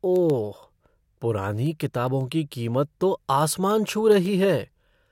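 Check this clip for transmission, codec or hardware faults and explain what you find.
One fault here: word clock ticks, from 0.16 to 5.08 s. The receiving clock runs unlocked, roughly 150 ppm off the sender, so a sample slips about every 0.15 s. That gives around forty sharp ticks of uneven strength.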